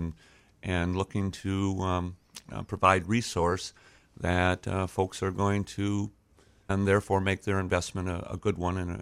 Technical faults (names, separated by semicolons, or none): stream segment skipped